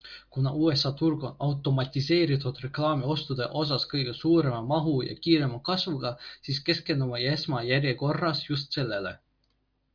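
No technical faults can be heard anywhere in the speech.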